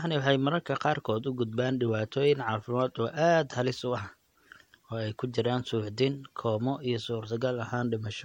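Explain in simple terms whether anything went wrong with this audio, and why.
Generation loss runs throughout the speech. It was likely caused by the audio being squeezed into MP3 and unpacked again about three times, with each pass losing a little more. The voice sounds swirly and hollow, the starts of sounds are smeared, and nothing remains above 16.7 kHz.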